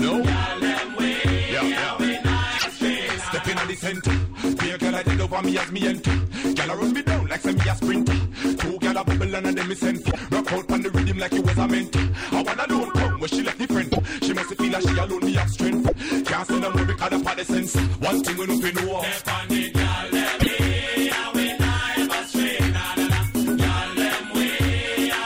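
From the start to 17.6 s, channel delay (comb filtering) dulls the top end. One channel runs a couple of samples late, and summing to mono cancels a notch near 10 kHz. Unlike a low-pass roll-off, the loss is a fixed notch, so the high end thins without being cut.

Short glitches about 0.08 s long occur at 2.58, 10.10, 13.91, 15.87 and 20.39 s. Each time, the audio jumps ahead and then gives a brief chirp, burst of noise or short hole lasting about three 26 ms frames. The likely cause is a broken MP3 bit reservoir. A plain dropout leaves only silence, but this fault also skips the audio ahead.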